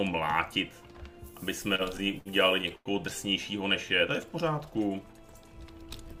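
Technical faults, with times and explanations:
1.75–2.89 s, repeated stalls (stutter): packets kept reaching the receiver late or slower than playback consumed them, so the jitter buffer drained nine times in this stretch, with the longest wait about 97 ms. Each time, the receiver stretched the last bit of sound to bridge the wait, fading it during the longer ones, about 261 ms of filler in all and nearly a quarter of the span. Nothing is lost, but the audio drags and stutters through the run.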